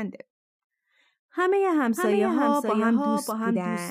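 From 1.97 s to the end, a doubled audio track appears: a second copy trails by roughly 0.7 s, about 5 dB quieter. It starts abruptly, likely from an edit.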